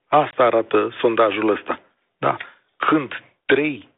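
At 0.31 s there's packet loss on an ADPCM call: about 20 ms, likely a couple of packets, drops to a hard-edged silence. The decoder's predictor and step size lose track of the sender's, so the audio comes back with brief distortion, settling by 0.37 s, just before "arată sondajul ăsta".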